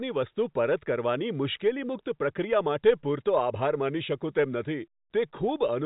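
No technical faults can be heard in the speech. The G.711 telephone coding path is audible as a band that stops at 4 kHz, with only a faint quantisation noise that rises and falls with the level.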